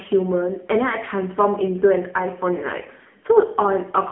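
AMR narrowband mobile codec damage runs throughout: nothing passes above 3.7 kHz, and heavy coding leaves the speech buzzy and synthetic, consistent with a low mode near 6.7 kbps.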